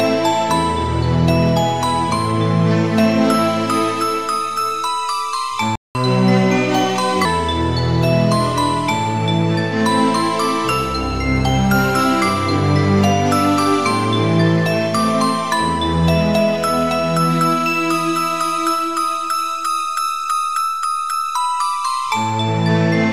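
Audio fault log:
5.76–5.95 s, playback stall. The sound cuts out mid-flow for about 195 ms, then resumes where it stopped. The player likely ran out of buffered data or had its thread blocked, so nothing reached the output until it recovered.
5.95–7.25 s, catch-up at higher speed. Straight after the gap the sound runs 1.15 times faster and sits about two semitones higher. The player is resampling its backlog to win back lost time, then drops to normal speed and pitch.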